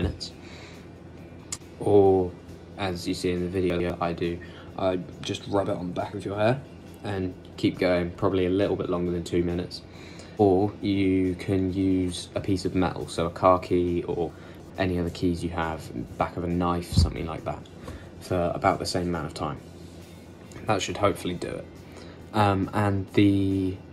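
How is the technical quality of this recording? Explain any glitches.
Two brief glitches are audible. Chunks out of order at 3.7–3.9 s and 14.3–14.7 s: a roughly 100 ms block plays late, after material meant to follow it, giving jumbled sound.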